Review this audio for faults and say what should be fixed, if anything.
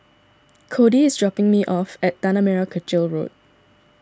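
No faults found in the speech, so nothing needs fixing.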